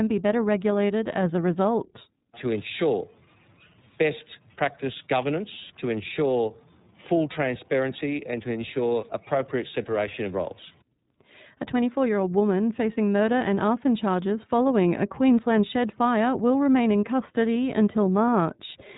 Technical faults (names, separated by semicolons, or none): iLBC codec